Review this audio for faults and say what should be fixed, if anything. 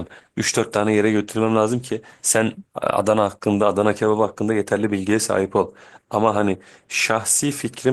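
Nothing in the recording needs fixing. The Opus voice compression leaves only a light coded texture while keeping the full audio band, consistent with hybrid coding at around 20 kbps.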